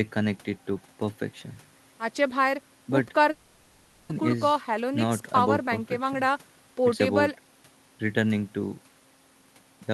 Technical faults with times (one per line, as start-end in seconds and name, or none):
3.31-4.12 long network dropout